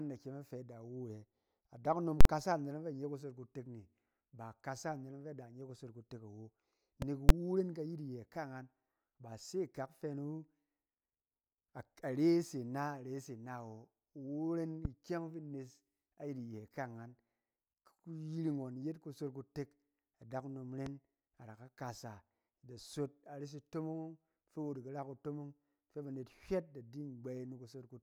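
At 2.21 s the speech is replaced for about 46 ms by invalid numbers at full scale. A calculation produced infinite or invalid values, and they were clamped to the largest sample value. The result is a very loud pop at each edge with silence between. That length fits a 2048-sample block.

At 7.02 s a single loud pop sits on top of the speech, about 15 dB above it. The speech carries on underneath. It sounds like a sharp electrical spike, likely from a switch, a plug or static.

At 7.29 s a second burst of invalid numbers at full scale lasts about 12 ms. Because the block is this short, the two edge pops merge into one bang. This fits a 512-sample block.

The same single loud pop returns at 14.85 s and again at 20.86 s. Each is about 15 dB above the speech and has the same sharp, brief thump.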